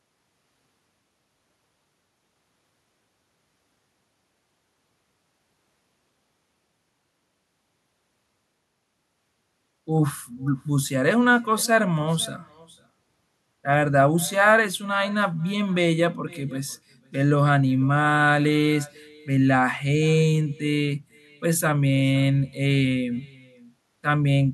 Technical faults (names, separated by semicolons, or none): echo with no canceller